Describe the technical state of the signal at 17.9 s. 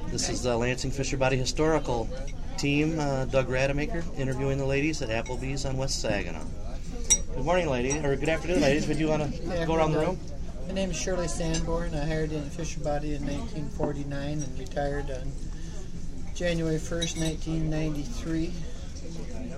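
At 17.9 s the signal is intact, with no dropout, clipping, glitch or other fault audible at that point.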